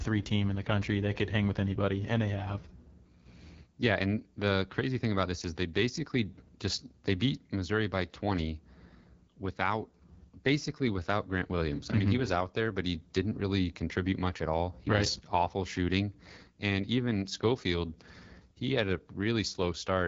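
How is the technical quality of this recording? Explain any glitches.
The quality is compromised by one fault that runs through the whole recording: the AMR wideband (HD Voice) codec. It is present from start to finish. The codec models speech below 6.4 kHz as pulses driving a vocal tract filter, then fills the band up to 7 kHz with shaped noise. Nothing is heard above 7.5 kHz. The damage is plainly audible. The speech sounds rough and raspy, which points to one of the codec's lowest rates, around 8.85 kbit/s.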